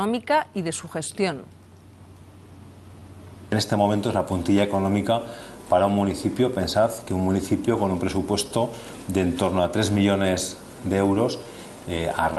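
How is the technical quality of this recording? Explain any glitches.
The recording has timing faults: a slow, steady drift corrected by small edits throughout, and one brief stall at the very end. The top end stops around 12 kHz, which fits an Opus call path.

Clock drift between sender and receiver runs through the whole clip. The sending side's clock runs slower than the receiver's, roughly one and a half percent. The receiver's jitter buffer therefore keeps draining rather than holding a steady level, and it has to compensate continuously. You hear no single dropout. Instead, small timing irregularities recur at uneven intervals. Packet loss would give isolated gaps with missing sound. Here the unevenness is spread across the whole clip and always leans the same way.

Repeated timing corrections span from 0.03 to 11.45 s. To keep pace with the slow sender, the receiver repeatedly stretches short pieces, so the sound plays at about 98% speed over that stretch and gains around a fifth of a second in total. 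Each edit is tiny and unevenly spaced. Together they come across as a faintly unsteady tempo or slight hiccups rather than clicks. A clean resampling error would differ: it would shift pitch uniformly with no hiccups.

A short stall from a late packet occurs from 12.33 to 12.38 s, right at the end. One packet arrived late, the jitter buffer ran empty, and the receiver held the last sound for about 30 ms before continuing from the same point. Nothing is skipped. The playout delay grows by about 30 ms. It is heard as a sound lingering slightly too long, with a faint buzz or dip. A concealed loss would differ, because there the real sound would be replaced and actually missing.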